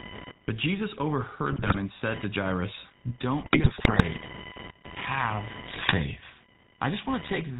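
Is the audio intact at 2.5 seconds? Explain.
No. At 2.5 seconds, as throughout the clip, computer activity noise adds a buzzing whine near 1 kHz, well below the speech. It rises and falls with processor load through the shared ground, not with the talker, unlike mains hum.

The GSM full-rate codec also gives the voice a gravelly, buzzy roughness with nothing above 4 kHz. Its pulse-driven excitation sets it apart from the watery swirl of modern codecs, and it fits a 13 kbps stream.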